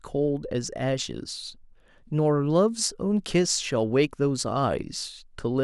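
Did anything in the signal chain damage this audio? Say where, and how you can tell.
No, nothing in the signal chain damaged this audio.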